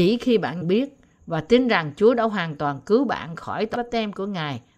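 At 0.61 to 0.63 s and again at 3.74 s, the speech is broken by brief glitches from damaged data in a compressed stream. Corrupted bytes make the decoder misread frames and lose sync.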